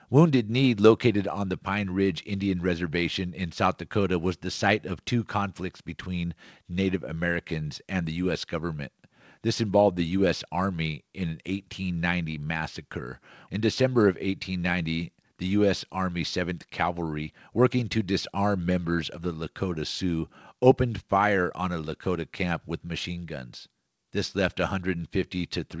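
No faults are audible in this speech; it came through a WebRTC call path whose band limit at 8 kHz fits a wideband codec such as G.722.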